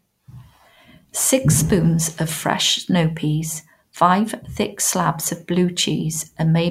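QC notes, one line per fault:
Nothing to flag on this speech clip; no faults turned up anywhere in it.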